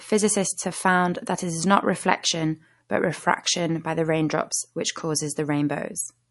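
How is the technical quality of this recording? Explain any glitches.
The quality is limited by plainly audible codec damage. It runs through the whole clip. Nothing reaches above 11.3 kHz, so the top of the speech sounds dull and clipped off. Sibilants swirl and take on a watery, metallic edge. Consonant attacks smear. This is likely MP3 compression at a low bitrate, with the damage pointing to around 48 kbps. Short of bits, the encoder cut the treble at a fixed point. It also dropped weak frequency lines frame by frame, and those gaps flicker as the swirl.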